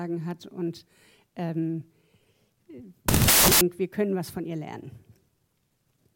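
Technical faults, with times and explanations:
3.08–3.61 s, samples built from the wrong bytes: the reader put each sample together from shifted or swapped bytes, so the fast-changing low bits became the dominant part of every value. For this half-second the sound turns into loud, harsh broadband noise.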